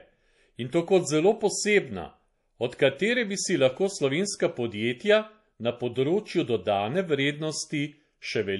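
MP3 compression throughout this speech clip: nothing above 11.5 kHz and plainly audible watery artefacts, likely from an encoder starved of bits, which fits roughly 48 kbps.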